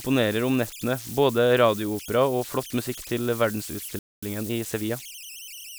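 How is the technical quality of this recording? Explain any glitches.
The recording has three technical faults: a constant tonal hiss and a short dropout followed by hurried playback.

Converter idle tones run throughout. An undithered delta-sigma converter locks into repeating bit patterns at low levels, leaving a whistle around 3 kHz, about 16 dB below the speech.

At 3.99 s a playback stall silences the speech for about 235 ms, until 4.23 s. The player likely ran out of buffered data or was blocked.

Time-compressed catch-up follows from 4.23 to 5.65 s. The player splices out small pieces to clear its backlog, so the speech runs 1.15 times fast at normal pitch.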